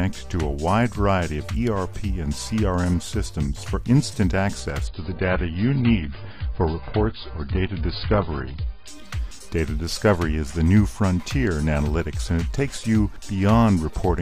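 Adaptive stream at a lower bitrate from 4.87 to 8.87 s: the audio abruptly loses everything above 5 kHz, gains codec smearing, then recovers without a gap, which fits a brief switch to a low-bitrate AAC stream.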